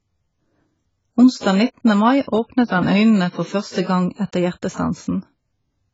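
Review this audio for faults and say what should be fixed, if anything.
The speech is dull and smeared from start to finish, with nothing above 7.6 kHz and a warbling, fizzy texture on sibilants. The likely cause is heavy AAC compression, its sparse quantised spectrum fitting a bitrate around 16 kbps. A plain low-pass filter would leave the remaining band clean, without this smearing. Encoding at a higher bitrate, or keeping an uncompressed copy for processing, would prevent it.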